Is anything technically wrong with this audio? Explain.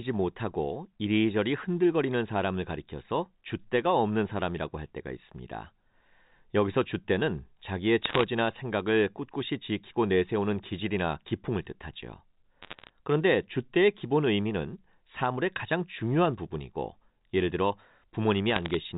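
Yes. Bit errors on a digital phone line appear in three short bursts, at 8.02–8.23 s, 12.62–12.90 s and 18.50–18.75 s. On the G.711 mu-law line, flipped bits, roughly half a percent of them, corrupt single samples. These produce sharp ticks and crackle over the speech, seen as isolated waveform spikes and thin vertical streaks across the spectrogram up to the 4 kHz band edge.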